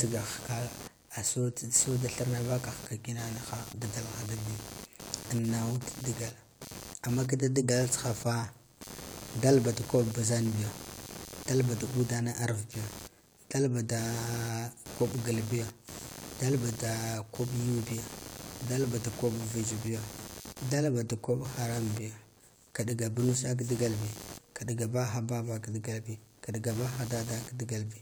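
Computer activity noise runs throughout. Load changes disturb the shared ground, adding a buzz pulsing about 100 times a second, seen as regular vertical spectrogram striations unrelated to the speech.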